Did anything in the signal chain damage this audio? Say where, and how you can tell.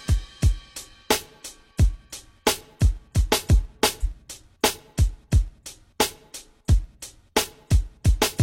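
Yes, at the codec stage. There's a brief burst of damaged data in the compressed stream from about 4.00 to 4.06 s, heard as a short blip. Corrupted bytes there threw the decoder off, so it misread those frames and had to resync.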